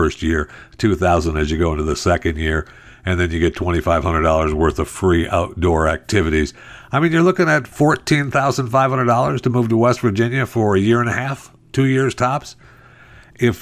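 No technical faults are audible.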